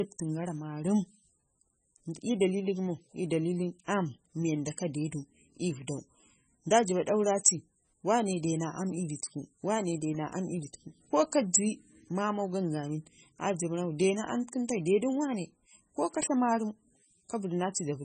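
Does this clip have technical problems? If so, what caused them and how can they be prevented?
Yes: throughout, the speech sounds watery and swirly, with nothing above 9 kHz, likely heavy MP3 compression at a very low bitrate, around 16 kbps. Encoding at a higher bitrate would prevent it.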